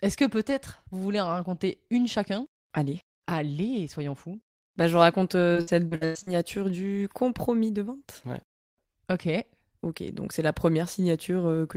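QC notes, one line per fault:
5.53–6.33 s, repeated packet loss (robotic sound): between "je raconte" and "du compromis de vente" the speech keeps breaking into short holes, the longest near 100 ms. Each gets patched by stretching the last sound, so about 39% of that stretch is filler, which makes it choppy and robotic.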